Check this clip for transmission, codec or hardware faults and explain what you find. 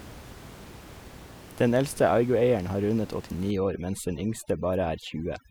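One processing fault is present: overdone noise removal, from 3.51 s to the end of the clip. A noise reduction stage set far too aggressively treats every frequency band close to its noise estimate as noise and pushes it down or out. The room noise, sitting about 20 dB below the speech, drops and breaks up into twinkling specks. The quieter components of the speech are stripped away too.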